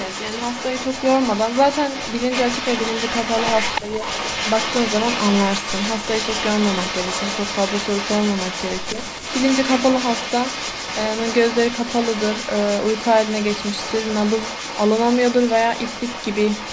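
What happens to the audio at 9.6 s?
Echo leak, present at 9.6 s and throughout the clip from start to finish: a delayed copy of the speech trails the original by about 0.3 s at roughly 10 dB lower, likely because a loudspeaker's sound reached the far end's microphone and its echo canceller didn't fully remove it.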